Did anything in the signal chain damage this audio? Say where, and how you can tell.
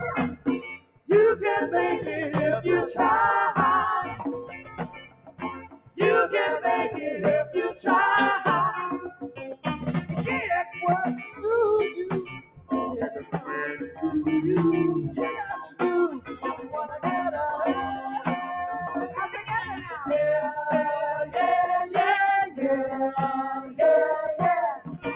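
Yes. The damage comes from the call processing stage: a speech noise suppressor was left on for non-speech sound. Across the whole clip the level swings by about 10 dB as it mistakes steady, sustained content and ambience for noise and pulls it down. Onsets survive while held parts sag, so the sound pumps and thins. On a waveform the envelope shows repeated dips after each attack. On a spectrogram, sustained bands flicker in brightness.

Sound was cut by the noise suppressor at three points: from 0.3 to 1.1 s (about 17 dB at its deepest, roughly 0.7 s affected), from 4.17 to 5.99 s (about 18 dB, around 2 s), and from 7.72 s to the end (about 18 dB). Here the gain reduction bites hardest on steady and decaying material, chopping tails short. On a spectrogram these stretches look darker and hollowed out behind transients. The waveform shows clipped-off decays. Within the G.711 call path, whose band stops at 4 kHz, the damage appears as thin, gated sound rather than as lost treble.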